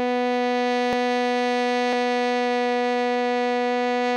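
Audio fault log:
0.93 s and 1.93 s, dropped buffer (overrun): the music jumps straight ahead with no silent gap, losing about 20 ms and then roughly 70 ms. This is likely an overrun, with samples overwritten before being read. An underrun would instead leave a brief hole.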